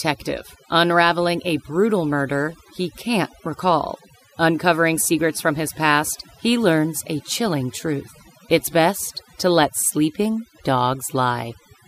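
Overdone noise removal runs through the whole speech clip: an overly aggressive suppressor drags bands near its noise estimate far down, taking soft speech detail along. The background is near silence with twinkling specks; a spectrogram shows scattered isolated dots and gouged, patchy harmonics.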